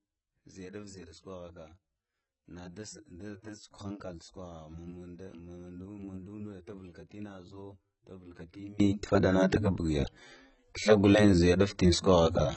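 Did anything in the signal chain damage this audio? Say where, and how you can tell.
Yes. Codec stage: the whole clip has nothing above 8.2 kHz, and the speech sounds heavily degraded. That is likely AAC compression at a very low bitrate, around 16 kbps.

Wiring or mixdown stage: from 0.0 to 8.8 s the level sits about 22 dB down, leaving only a residual. Likely one channel inverted, cancelling shared content when summed to mono.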